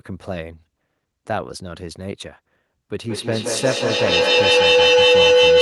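At 2.92 s a feedback howl begins and runs to the end of the clip. Two devices in the same room are likely both on the call. Sound from one loudspeaker reaches the other microphone and comes back louder each trip. The repeats narrow to a tone around 500 Hz. The loop's delay is roughly a fifth of a second. At its peak it sits about 11 dB above the speech.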